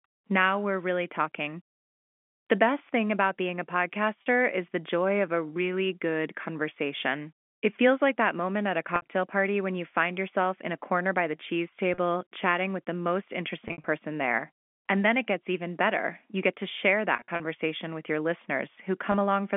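Short held, buzzy smears break into the speech at 4.22 s (after "thing about being a"), 8.96 s (after "that moment at a"), 11.94 s, 13.68 s, 17.16 s (after "get to share") and 19.12 s. The ones at 13.68 s and 17.16 s stutter across about 160 ms and 240 ms. This is packet loss with pitch repetition: 20 to 120 ms of audio went missing, and the receiver filled each gap by repeating the last pitch period.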